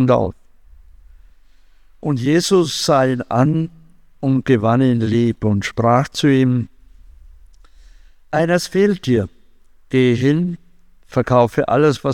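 No audible technical fault anywhere in the audio.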